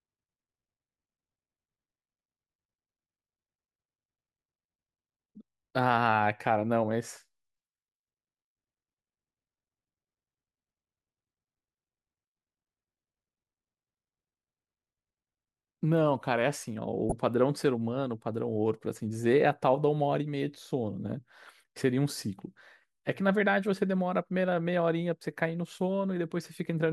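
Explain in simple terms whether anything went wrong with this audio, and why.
Two short bursts of DAB burbling break into the speech, at 17.03 to 17.12 s and 21.06 to 21.12 s. Weak digital radio reception let uncorrected errors into the audio data, so short blips of noise break into individual frequency bands.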